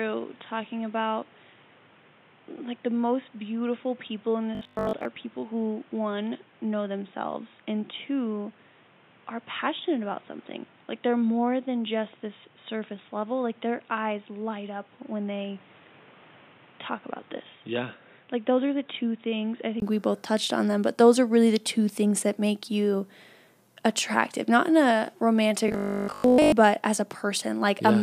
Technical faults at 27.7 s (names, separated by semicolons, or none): none